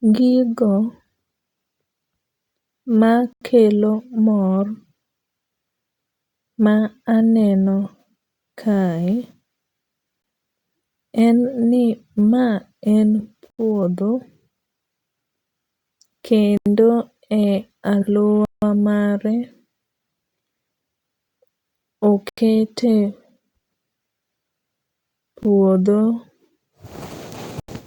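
The speech is broken by blocks of digital silence at 3.33 s, 10.22 s, 13.50 s (just after "en ni ma en"), 16.57 s, 18.45 s, 22.29 s, 25.43 s and 27.60 s. Most last 85 ms, which fits an output buffer of 4096 samples not being filled in time. The one at 18.45 s runs 171 ms, two buffers' worth, and those at 10.22 s and 25.43 s are shorter, near 19 ms and 17 ms. Each cuts abruptly to silence and back with no fade, heard as a very short hole on the short gaps and a clear hole on the longer ones.

From 27.02 s to the end, GSM signalling bursts from a nearby 2G phone are rectified by the audio circuit. They sit about 20 dB below the speech as a galloping dit-dit-dit of short 217 Hz buzzes, and the final dropout at 27.60 s falls inside them.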